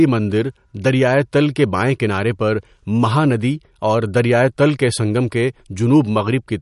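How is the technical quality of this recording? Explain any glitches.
The speech is noticeably degraded throughout by lossy coding. From start to finish it sounds watery and swirly, with metallic chirps on s sounds, smeared consonant attacks, and nothing above 11.2 kHz. The likely cause is MP3 compression at a low bitrate, which fits about 48 kbps. Short of bits, the encoder cuts the treble at a fixed point and drops weak frequency lines, which flicker on and off between frames and leave that burbling texture.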